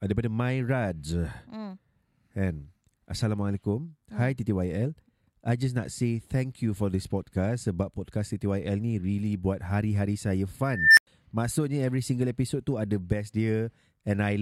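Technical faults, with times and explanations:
10.72–11.07 s, unstable filter: runaway recursive feedback swells a tone around 2 kHz to clipping within 0.26 s, then numeric overflow leaves 97 ms of silence.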